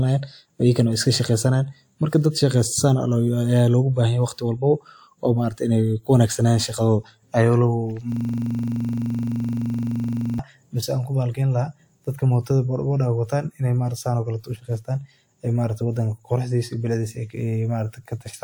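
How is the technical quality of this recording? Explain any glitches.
There is one serious glitch, a system hang loop from 8.12 to 10.39 s, just before "mise anku bahalkiyeyn". The computer or its audio driver stalled while the sound hardware kept replaying the same stretch of its ring buffer. A 42.67 ms slice, which fits a 2048-sample buffer, repeats about fifty times. At 23.4 repeats per second, the speech becomes a rough, rattling buzz that freezes in place for over two seconds.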